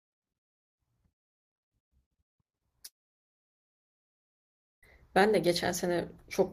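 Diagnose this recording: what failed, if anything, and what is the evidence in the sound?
A long network dropout cuts this speech from 2.85 to 4.85 s. The last sound smears into a brief fading buzz, then silence holds for about 1.9 s, and speech resumes with 1.98 s gone, likely packets lost in the network.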